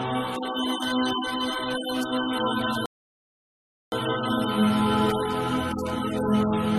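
At 2.86 s the sound halts into silence until 3.92 s, a rebuffering stall where playback ran dry, then resumes exactly where it stopped, adding about 1.06 s without losing any audio, unlike a dropout.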